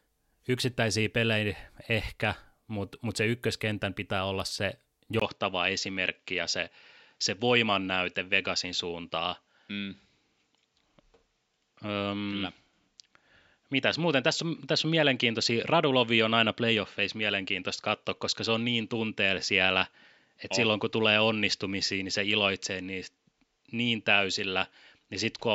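At 5.2 s, after "ykköskentän pitää olla se", a 20 ms waveform gap likely marks an input switched to a poorer device; the spectrogram then goes empty above 7.6 kHz, sounding duller.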